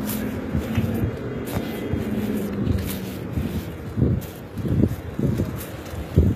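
Throughout the clip the treble sounds rebuilt rather than recorded: upper detail is bright but gritty and metallic, and nothing extends above about 14.9 kHz. This is likely HE-AAC compression, with treble regenerated from copied lower bands, and the plainly audible damage fits a bitrate around 20 kbps.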